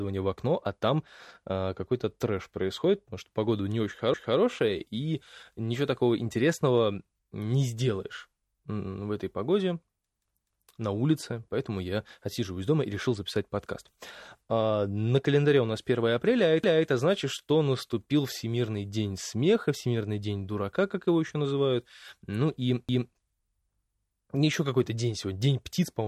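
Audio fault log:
4.14–4.39 s, 10.39–10.64 s, 16.64–16.89 s, 22.89–23.14 s: overlapping chunks. The speech jumps back at each of these points and replays the preceding 250 ms, producing a short stutter with a click at the seam. The joins fall every 6.25 s, and the audio was handled in 6-second blocks. Each block began a quarter-second before the previous one finished, and the shared stretch was played twice instead of being trimmed or crossfaded.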